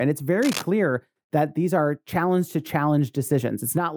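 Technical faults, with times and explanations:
0.42–0.63 s, cable scratch noise: a worn cable or connector likely moved, and its rapidly changing contact resistance added rough, scratchy bursts roughly 10 dB below the speech.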